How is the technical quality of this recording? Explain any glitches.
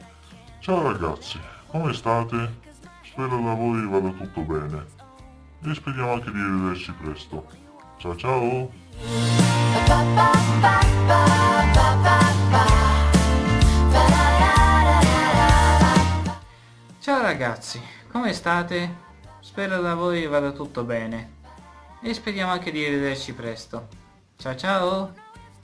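The recording has one technical fault, aliasing, present from start to finish. The sound was downsampled, which points to a rate of about 22 kHz, with no anti-alias filter, so content above 11 kHz folds back below that edge as unrelated, metallic grit, perhaps 25 dB under the signal. Unlike clipping distortion, the added tones don't follow the harmonics of the source, and the spectrum runs hard up to 11 kHz rather than rolling off smoothly.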